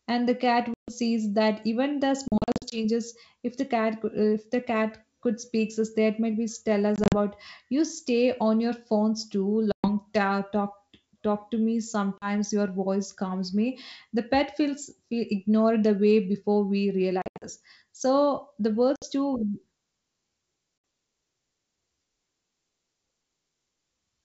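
Packet loss on an ADPCM call punches hard-edged silent holes into the speech at 0.74, 2.28, 6.96, 9.72, 12.18, 17.22, 18.96 and 20.78 s, with 40 to 220 ms lost each time. Waveform and spectrogram show abrupt blank gaps, with the 2.28 and 6.96 s losses broken into short chunks. After each gap the G.722 decoder's predictor and step size no longer match the sender's, so the sound returns with brief distortion, at times with a click, visible as a vertical broadband stripe, or a level jump.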